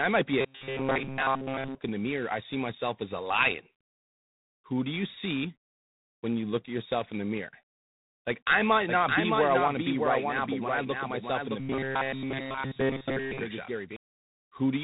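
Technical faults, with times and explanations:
Throughout, G.726 ADPCM: the speech carries a harsh, rasping hiss that swells and fades with its level, and nothing above 3.8 kHz comes through. The grainy noise points to the 24 kbit/s mode. At that rate each sample carries only 3 bits describing how far the signal strays from an adaptive prediction. The resulting coarse steps produce a noise floor that tracks the speech, and the telephone-band limit removes the upper range.
0.41–1.75 s and 11.60–13.41 s, robotic sound from repeated short buffers: right after "might be a", the voice becomes a rigid, metallic buzz pitched at 134 Hz that only loosely follows the speech. In the second stretch, every part of the sound is affected, not just most of it. The likely cause is a playback path starved of new audio that keeps looping the last few milliseconds. A 134 Hz buzz fits a repeat of about 7.5 ms, and the real audio is skipped in between.
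8.88–13.96 s, doubled audio track: just after "I might", a second full-band copy of the speech appears about 0.7 s behind the first and about 5 dB quieter. It carries no room colour or decaying tail, and it starts and stops abruptly. The likely cause is the same audio being captured a second time by a slower path and mixed back in, so the two copies run out of step.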